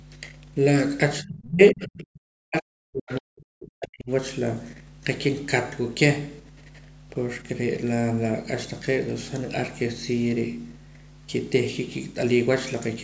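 A steady 50 Hz mains hum sits under the whole recording, fairly prominent against the speech, as power-line energy couples into the signal. Its fixed pitch and unchanging level set it apart from broadband rumble or room noise, which wander and lack a single tonal centre.

From 1.21 to 4.10 s the talker's speech is suppressed in double talk. For about three seconds it sinks sharply, at its deepest almost to silence. The likely cause is an echo canceller turning everything down while both sides spoke at once.

Between 3.09 and 3.21 s a brief scrap of the other side's voice leaks through. It is faint, well below the talker, likely loudspeaker echo that the canceller failed to remove. It is heard as a separate second voice, not as a smeared reverberant tail on the talker.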